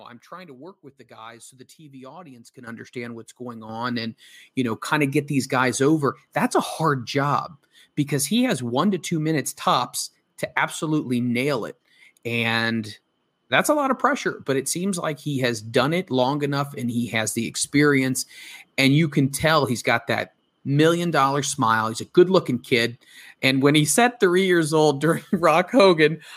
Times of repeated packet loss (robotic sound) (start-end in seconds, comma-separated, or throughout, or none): none